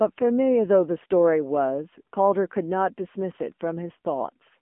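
From start to end the speech carries AMR narrowband mobile codec damage: band-limited to about 200 Hz to 3.4 kHz with nothing above 3.6 kHz, and a plainly buzzy, synthetic quality from coarse vocal-tract modelling that points to a mode near 8 kbps.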